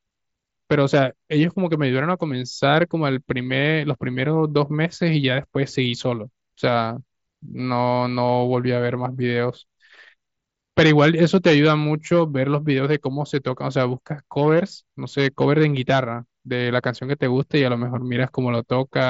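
No technical faults are audible in this speech.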